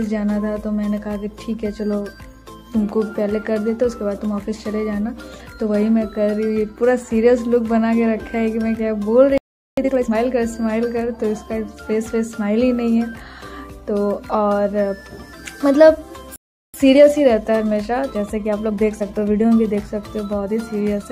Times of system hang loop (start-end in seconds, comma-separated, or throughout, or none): none